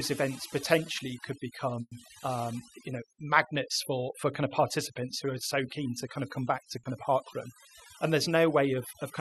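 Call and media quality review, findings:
Overdone noise removal, whole clip: background dropped and broken up into twinkly specks. Noise suppressor set too aggressive, clamping bands near its noise estimate and taking quiet speech detail along with them.

Burst of packet loss, 1.81–1.93 s: last sound held and faded for about 100 ms, then roughly 40 ms of silence, resuming with about 100 ms of speech gone. Jitter buffer/decoder concealment stretching the last frame over a multi-packet hole.

Short concealed packet loss, 6.79–6.85 s: brief smear, about 40 ms, where the decoder extrapolated from the preceding sound and blended back in. Late or dropped packets, papered over by concealment; a short consonant may have vanished.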